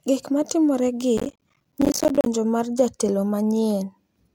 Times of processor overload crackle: 1.18-2.26

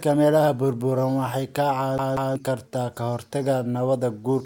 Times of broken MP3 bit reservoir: none

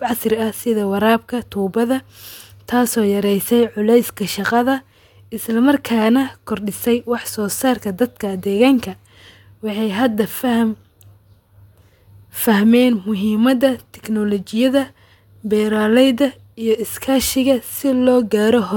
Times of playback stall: none

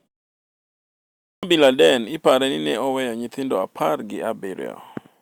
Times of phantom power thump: none

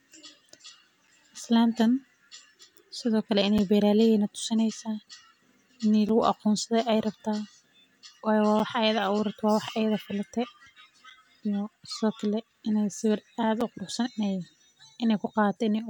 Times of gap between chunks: 1.07, 3.58, 6.09, 8.59, 11.10, 13.61

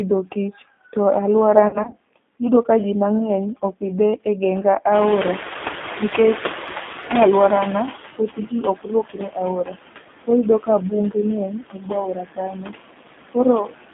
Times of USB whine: none

